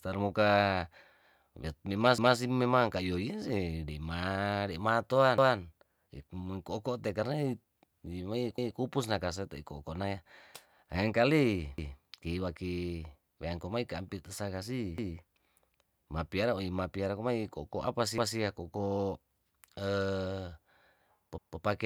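Speech with overlapping chunks: with 3 s chunks, every 3.2 s, at 2.18, 5.38, 8.58, 11.78, 14.98, 18.18 and 21.38 s, a 200 ms piece replays where each chunk starts early, giving a regular stutter.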